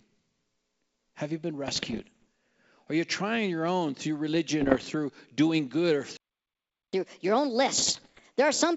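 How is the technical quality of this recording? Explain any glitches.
The recording has three kinds of glitch, carried over a G.722 wideband telephone link whose coding sounds clean, with speech extending to about 7 kHz.

Bit errors on an ADPCM link occur from 1.68 to 2.25 s, 4.61 to 4.85 s and 7.78 to 8.27 s, at roughly 1 to 1.5 percent of bits. Each flipped bit throws off the decoder's step size and predictor, so instead of clean gaps you hear pops and rough bursts that ring on, with brief swings in level.

A playback stall silences the audio mid-flow from 6.17 to 6.93 s, about 0.76 s, likely because the player ran out of data. Unlike a dropout, nothing is skipped: the sound resumes where it stopped.

Catch-up at higher speed follows from 6.93 s to the end, with playback running at 1.25 times normal speed, about four semitones higher. Because tempo and pitch rise together only after the stall, this is backlog resampling rather than a wrong sample rate across the whole clip.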